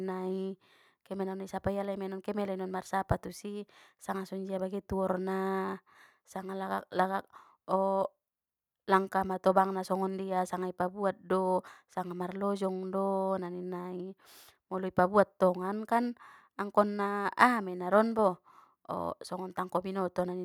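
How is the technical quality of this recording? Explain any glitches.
The technical quality of the recording is sound, with no glitches to explain.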